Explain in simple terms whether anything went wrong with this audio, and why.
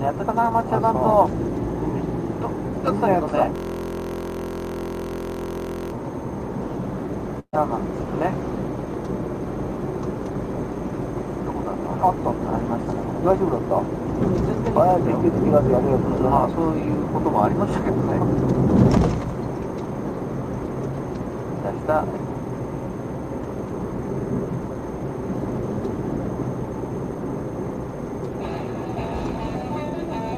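From 3.56 to 5.92 s there is a system hang loop. The computer stalled while the sound hardware kept replaying the same tiny 23 ms chunk, which fits a 1024-sample buffer, over and over. Repeated about 43 times a second, it turns into a steady buzz.

At 7.39 s there is a burst of packet loss lasting until 7.55 s. A run of audio packets never arrived in time, so the player stretched out the last sound and let it fade away. When the audio comes back, roughly 140 ms of the original is simply missing.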